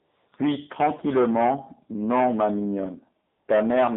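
AMR comfort noise, 0 to 0.32 s: the phone sent no speech frames, so the receiver filled the gap with smooth, steady synthetic noise that switches out abruptly.

AMR narrowband mobile codec, throughout: sound is confined to 200 Hz to 3.7 kHz and comes out plainly buzzy and synthetic, which fits a low 7.4 kbps mode.

AMR comfort noise, 3.26 to 3.48 s: a further 220 ms without speech frames is again replaced by flat generated noise, switching in and out against the coded sound.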